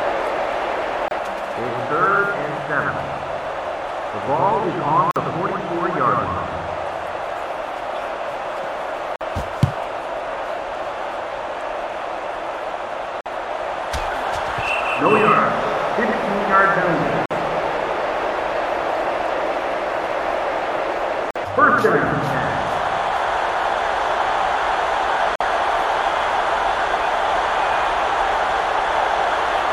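At 1.08 s the sound breaks for about 29 ms. Then it resumes where it stopped. Six more breaks follow, each about 49 ms long: 5.11, 9.16, 13.21, 17.26, 21.31 and 25.36 s. They recur every 4 s. This is a gap at a join of encoded pieces. Separately encoded pieces were spliced untrimmed. Each piece keeps its start-up delay and padded last frame. Codec smearing softens the gap edges.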